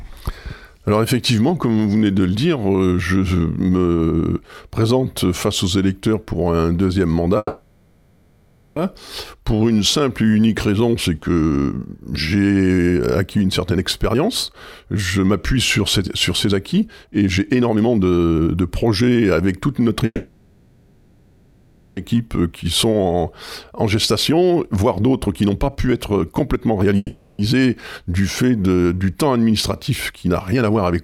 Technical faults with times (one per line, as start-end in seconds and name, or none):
7.37-8.78 call audio freeze
13.72-20.03 jitter buffer speed-up
20.06-21.99 call audio freeze
22.16-26.96 jitter buffer speed-up
26.97-27.41 call audio freeze
29.50-31.03 jitter buffer speed-up